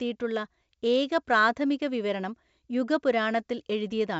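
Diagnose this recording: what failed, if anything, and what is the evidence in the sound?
Nothing has failed: the speech carries G.722 wideband telephone coding, with content ending near 7.7 kHz and the lower band as clean as the top mode of that codec gives, which fits 64 kbit/s operation.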